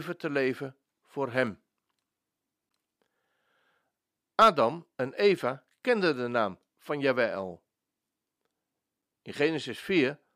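At 2.69, 5.61 and 9.02 s the speech drops into a block of digital silence lasting 11.6, 2.9 and 5.8 ms, which fits unfilled 512-, 128- and 256-sample buffers. The abrupt, unfaded edges make sharp ticks, not the soft gap of a faded dropout.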